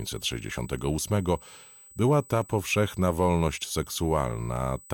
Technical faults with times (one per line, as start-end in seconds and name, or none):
0.00-4.94 USB whine